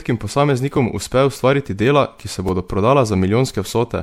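From the start, the whole clip has that swirly, hollow quality, with consonant attacks smeared and nothing above 17.3 kHz. That's more damage than a single MP3 pass at around 96 kbit/s would leave, so the likely cause is generation loss. It sounds as if the audio was decoded and re-encoded about four times, with each pass requantising on a shifted frame grid, so the noise and spectral holes pile up.

Then, at 2.49 s, right after "ki se", there's a tiny click where a repeated buffer occurs. Fresh audio didn't arrive in time, so the device played its last chunk once more, a 2.9 ms slice that fits a 128-sample buffer. Because the chunk is so short and the repeat is butted on with hard joins, it comes across as a click rather than a stutter. Nothing is actually lost; the audio just carries on afterwards.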